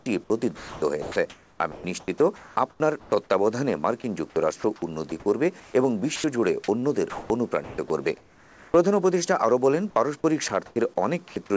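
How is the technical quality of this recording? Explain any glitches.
The recording is marred by repeated dropouts where real sound gives way to synthetic hiss, heard through a call codec whose content stops at 8 kHz, which fits G.722 over a WebRTC path.

Sound chopped by the voice detector occurs at 0 to 3.12 s, 4.6 to 6.24 s, 6.8 to 8.74 s, 10.48 to 10.76 s and 11.28 to 11.5 s. The sender's voice detector likely kept toggling transmission off, so the receiver substituted generated comfort noise: about 1.4 s in the first stretch, 0.28 s, 0.94 s, then 0.12 s twice. Quiet edges vanish and the audio sounds choppy.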